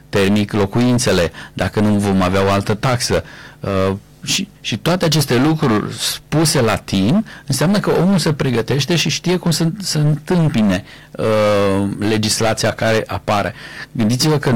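Hard clipping runs through the whole speech clip. The signal is driven about 18 dB past what the chain can pass, so roughly a fifth of the samples hit the ceiling and are sliced flat, adding high harmonics heard as harsh fuzz on every loud syllable.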